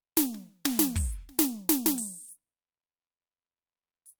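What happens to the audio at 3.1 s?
At 3.1 s the music plays through intact, with no dropout, click, distortion or other fault at that point.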